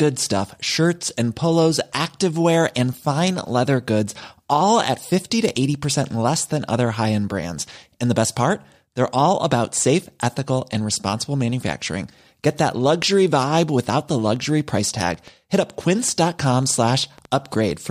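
From 13.96 s to 17.72 s a train of clicks runs over the speech: roughly twenty short, similar pulses at an average of about 6.1 per second, spaced unevenly rather than on a fixed beat. Their peaks sit at about the same level as the speech, so they read as distinct ticking and popping, audible through the pauses as well. The pattern points to a likely cause in electrical interference from nearby equipment or a faulty connection or power supply.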